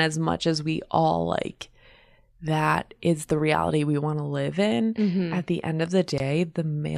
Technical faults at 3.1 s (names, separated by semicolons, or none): none